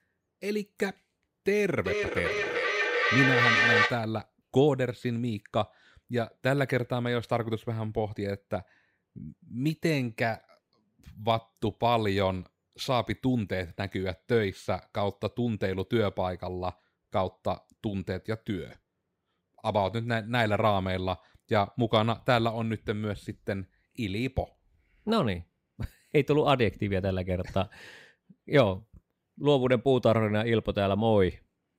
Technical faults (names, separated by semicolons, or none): feedback echo between two devices